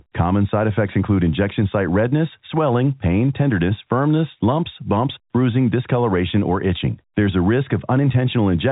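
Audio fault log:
Speech arrives through G.711 telephone coding, with nothing above about 3.8 kHz and at most a faint trace left by the codec, and no fault is present.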